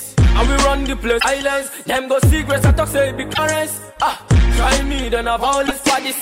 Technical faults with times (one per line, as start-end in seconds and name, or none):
1.16-1.25 damaged data in a compressed stream
3.31-3.39 damaged data in a compressed stream
5.63-5.71 damaged data in a compressed stream